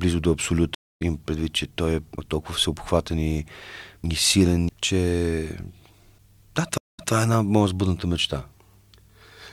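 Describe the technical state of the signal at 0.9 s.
At 0.9 s the speech sits inside a stream reconnect running from 0.75 to 1.02 s. The connection dropped, giving about 0.23 s of silence, and a fresh decoder then picked the stream up mid-flow, so the speech resumes roughly 150 ms further on, as a small jump forward.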